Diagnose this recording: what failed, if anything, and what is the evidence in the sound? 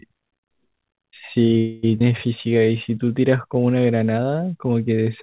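Call audio freeze, network and jitter buffer, 1.58 to 1.85 s. For about 0.25 s the last sound hangs as a fading buzz, then the audio resumes exactly where it stopped. A spectrogram shows flat, decaying horizontal bands, and the waveform shows a repeating, shrinking envelope. The likely cause is delayed packets draining the buffer.

Skip ahead, jitter buffer, 1.99 to 2.02 s. Playback jumps forward with only a very short fill, and about a tenth of a second of audio is gone. The two sides are butted together, so the waveform shows an abrupt splice and the spectrogram an instant change in harmonic pattern.

Jitter buffer slow-down, 2.49 to 3.55 s. The audio runs at 90% speed with unchanged pitch, adding 118 ms as the receiver repeats single pitch periods to rebuild its reserve. The waveform shows near-identical cycles in a row, and spectrogram harmonics stretch horizontally without shifting. 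Throughout, nothing appears above 4 kHz, which fits a G.711 mu-law call path.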